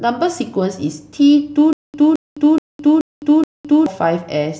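From 1.73 to 3.86 s, a stutter with silent gaps: a 217 ms fragment repeats five times every 427 ms with 209 ms digital silence between, likely a stalled stream.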